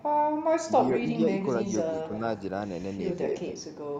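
At 0.00–0.06 s a short echo leak appears: a faint copy of the speech, well below the direct signal, returning 249 ms late. Brief echo leaks recur at 1.91–1.97, 2.14–2.19, 3.10–3.17 and 3.39–3.48 s, all at the same 249 ms delay. The scraps at 3.10 s and 0.00 s are barely audible. The one at 2.14 s is the most prominent, sitting only about 15 dB under the speech, and 3.39 s is close behind. The likely cause is a loudspeaker-side echo canceller letting part of its microphone pickup pass back down the line.

From 1.86 to 2.11 s the speech is suppressed in double talk. The level dips by roughly 10 dB in places, over something like 150 ms in total, while the echo scrap at 1.91 s overlaps it. The same dip returns at 3.52–3.76 s. This is likely the echo canceller failing to separate near-end speech from echo during overlap and attenuating both together.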